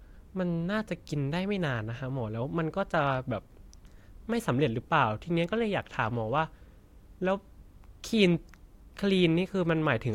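No technical faults can be heard anywhere in the recording.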